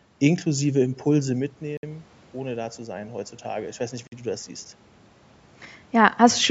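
From 0.81 s to 4.53 s the speech and the room noise behind it swell together, creeping up by about 6 dB over nearly four seconds. This is automatic gain rising. The level reaching the microphone fell by about 12 dB, as the talker drew back around the one-second mark, and the gain control slowly raised its gain to compensate. Because it amplifies everything it receives, the background climbs with the voice.

Twice during that rise the sound drops out to dead silence and then picks up again: a 60 ms gap from 1.77 s to 1.83 s and a 49 ms gap from 4.07 s to 4.12 s. These short holes are likely a Bluetooth stall, where interference delayed the packets so the headphones' buffer ran empty and playback paused until the missing audio arrived.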